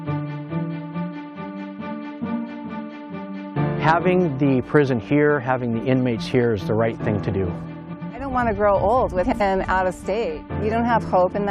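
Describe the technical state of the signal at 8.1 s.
At 8.1 s the signal sits at the end of frames out of order, spanning 7.93 to 8.11 s. Two adjacent 85.3 ms blocks, which fits two runs of four frames, play swapped, giving a garbled flutter. Unlike a dropout or repeat, no time is lost or duplicated.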